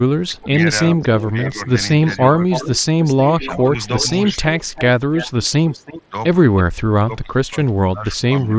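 Speech suppressed in double talk first appears from 0.2 to 1.6 s. For roughly half a second in total the speech dips, by about 20 dB at its deepest. The likely cause is an echo canceller that could not tell its own talker from returning loudspeaker sound while both sides spoke, so it turned both down. The same suppression returns briefly at 2.35 to 2.49 s as a shallow dip of about 5 dB, again at 5.99 to 6.14 s at about 15 dB, and most heavily from 6.73 s to the end, where about a second of speech sinks by up to about 25 dB.

Echo leak runs from 1.01 to 6.02 s as a faint second copy of the speech trailing 307 ms behind, about 15 dB below it. This is likely a loudspeaker on one side whose canceller let part of the microphone pickup slip back into the call. A short scrap of it recurs at 6.56 to 6.63 s, delayed by 324 ms and about 20 dB down, within the 8 kHz band of the mSBC headset link.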